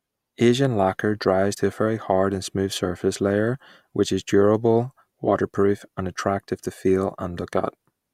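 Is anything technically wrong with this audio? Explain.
Yes, there's an overlap between stream segments, heard as two tiny skips in the speech at 5.54 s and 7.53 s. The time stamps of neighbouring segments claim a bit of shared time, so the player trims that overlap even though the audio wasn't actually duplicated. A few milliseconds go missing and the waveform jumps, giving that small skip. The two skips sit about 2 seconds apart, which fits 2-second segments.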